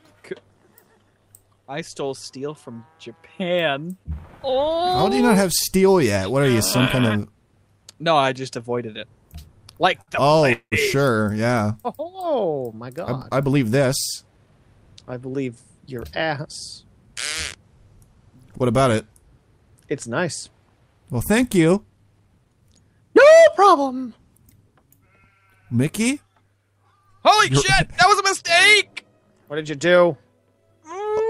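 At 10.01 s the sound hangs on one spot for about 61 ms, slightly buzzy, then resumes exactly where it paused. This is a short stall from a late packet: the jitter buffer ran dry and the receiver stretched the last sound until the packet arrived.

From 10.53 to 10.74 s a longer hold follows, a fading buzz that drops into about 80 ms of silence before the audio picks up unchanged. This call audio freeze, roughly 189 ms inserted with nothing lost, was likely caused by packets held up in transit emptying the buffer.

Three stretches then run faster at unchanged pitch: 13.86 to 14.47 s runs about 7% fast, 21.65 to 22.77 s about 11% fast, and 26.92 to 29.33 s about 3% fast. This is jitter buffer speed-up. The receiver, holding too much queued audio, clipped out tiny pitch-period slices to reduce delay, removing roughly a twentieth, a seventh and a fifteenth of a second respectively.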